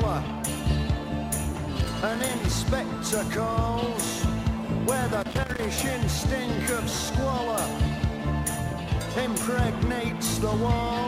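An irregular burst of scratchy crackle breaks into the audio from 1.75 to 2.48 s, and again from 5.21 to 5.65 s. This is loose connector crackle: a worn or dirty contact repeatedly making and breaking, chopping the signal into fragments.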